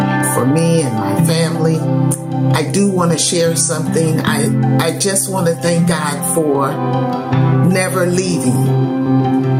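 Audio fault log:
Throughout: gain pumping. The gain keeps getting pulled down on loud sounds, swinging around 15 dB, so loud and soft parts sit closer in level and everything feels squashed. The likely culprit is input gain set way too high, with a fast limiter clamping down on each peak.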